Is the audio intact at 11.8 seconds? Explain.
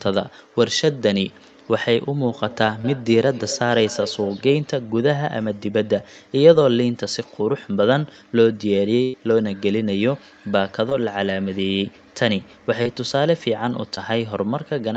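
Yes, the speech at 11.8 seconds is intact, with nothing beyond the band-limited sound of the call path, which carries nothing above 8 kHz.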